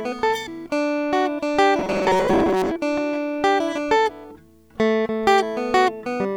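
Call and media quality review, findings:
Robotic sound from repeated short buffers, 1.79–2.72 s: rigid 188 Hz buzz, likely an underrun looping 5.3 ms chunks. Spectrogram: fixed 188 Hz harmonic comb. Waveform: identical repeating cycles.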